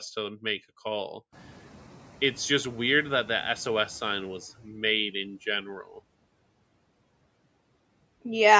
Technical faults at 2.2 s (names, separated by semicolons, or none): noise suppressor catching up